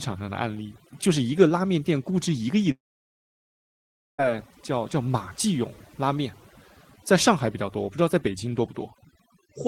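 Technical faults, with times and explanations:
Throughout: overdone noise removal. The background sits at near silence, broken by twinkling specks. A noise reduction stage set far too aggressively is cutting individual frequency bands whenever their level falls close to its noise estimate. Quieter components of the speech land in that range too and are stripped away, and the isolated bands that briefly survive produce the glittering residue.
2.71 to 4.20 s: long network dropout. The speech breaks off, a remnant of the last sound trails away for about 1.5 s, and about 1.4 s of near silence follows before the audio resumes. Roughly 1.5 s of material never returns, so the speech picks up later than where it stopped. This is likely a stretch of lost packets: the receiver stretched out the final sound for about 1.5 s, then let it decay to silence.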